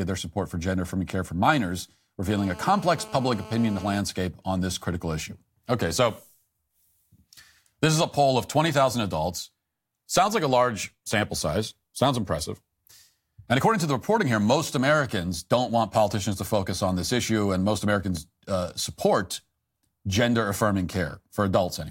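A nearby 2G phone on a call transmits its radio in regular bursts, and the audio circuitry rectifies those pulses into the signal path, producing GSM phone buzz from 2.30 s to 4.00 s. The result is a hard, raspy buzz at 216.7 Hz, rich in harmonics and unrelated to the speech, sitting about 18 dB below the signal. Because the phone is in a call, the buzz holds nearly steady throughout.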